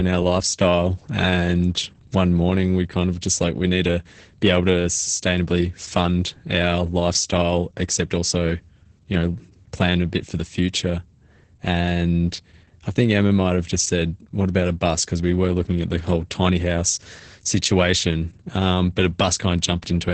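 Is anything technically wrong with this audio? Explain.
Yes. Throughout, the speech sounds muffled, hoarse and slightly robotic, with nothing above about 8.8 kHz. This is heavy Opus voice compression: the linear-prediction SILK coder limits the band to wideband and quantises the excitation coarsely, consistent with a bitrate around 10 kbps.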